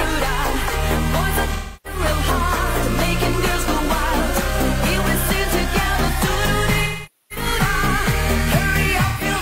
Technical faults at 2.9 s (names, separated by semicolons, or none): none